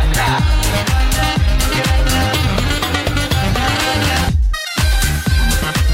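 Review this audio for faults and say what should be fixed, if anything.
Nothing stood out on listening, so there is nothing here that needs fixing.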